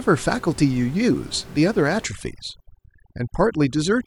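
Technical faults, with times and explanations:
2.07 s to 4.06 s, overdone noise removal: the room noise, which sits about 21 dB under the speech up to this point, suddenly drops and breaks up into twinkling specks. A noise reduction stage set too strong is switching individual frequency bands down or off whenever their level falls close to its noise estimate, and it is removing the quieter parts of the speech along with the noise.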